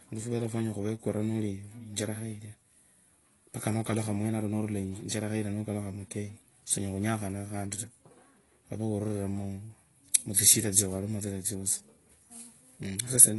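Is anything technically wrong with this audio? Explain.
Yes. Throughout the speech there is plainly audible damage consistent with AAC compression. Nothing reaches above 11.5 kHz, so the top octave is missing and the sound is dull. The likely cause is an AAC-LC encode at a rate that fits roughly 32 kbps. At that rate the encoder cannot spend enough bits on each frame, so it drops high bands and coarsely quantises the rest, leaving a smeared, warbling texture on sustained sounds and fizzy sibilants.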